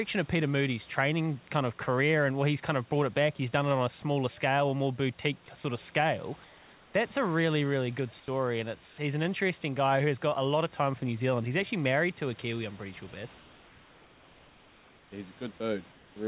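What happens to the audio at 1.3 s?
At 1.3 s the speech comes through intact, with no dropout, glitch or distortion at that moment.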